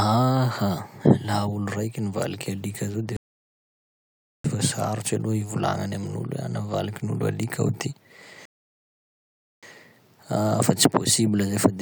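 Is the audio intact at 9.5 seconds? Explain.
No. At 9.5 seconds the speech sits inside a rebuffering stall running from 8.45 to 9.63 s. The player exhausted its downloaded audio and paused until more data arrived, so the speech drops to silence and then picks up exactly where it left off, adding about 1.17 s without losing anything. On a waveform this is a flat line between those times; a spectrogram shows a blank vertical band with energy stopping and restarting abruptly.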